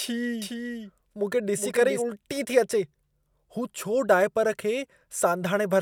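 From 0.42 s to 2.02 s the speech has a doubled audio track. A second full-band copy of the same speech runs a few hundred milliseconds behind the original, a few decibels quieter, with no reverberant tail or room colour. The likely cause is a slower second capture path or an edit leaving two copies out of step. On a spectrogram, every syllable's pattern reappears shifted right, and both the copy's start and stop are hard edges in the waveform.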